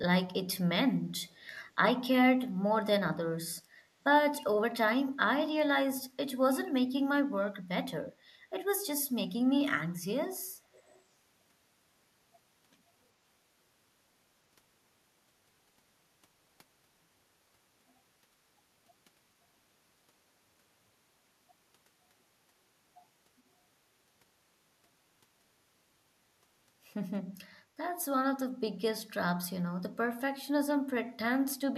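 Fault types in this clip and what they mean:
Echo leak, 1.21 to 1.58 s and 10.73 to 11.02 s: a very faint copy of the speech trails it by 377 ms, roughly 35 to 40 dB down. Likely a loudspeaker at the other end whose echo canceller missed some pickup and sent it back.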